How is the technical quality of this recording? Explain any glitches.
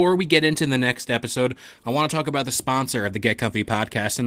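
No glitches or technical faults are audible anywhere in this speech recording.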